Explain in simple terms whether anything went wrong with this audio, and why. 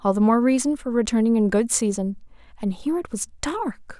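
Nothing went wrong with this speech recording; there's no audible fault to explain.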